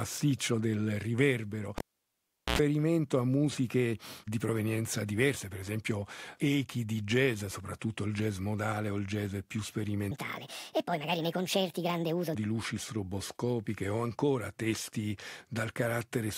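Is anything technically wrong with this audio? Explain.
Yes, there are two faults.

From 1.78 to 2.59 s, a cable is pulled and plugged in. A pop opens 0.76 s of near-flat silence, with an 86 ms burst of 60 Hz buzz before the closing pop.

From 10.11 to 12.35 s, a section plays at the wrong speed, 1.51 times too fast, likely clocked incorrectly. The sound is hurried and about seven semitones higher, and the spectrogram harmonics jump upward.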